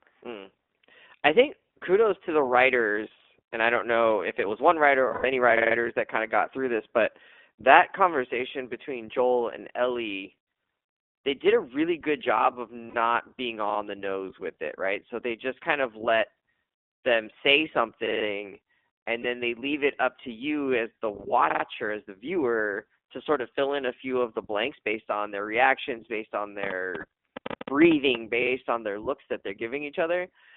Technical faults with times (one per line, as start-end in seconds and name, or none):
0.00-30.57 iLBC codec
5.08-5.26 lost iLBC frames
12.90-12.96 lost iLBC frames
19.22-19.27 lost iLBC frames
26.64-28.16 train of clicks
27.00-27.05 lost iLBC frames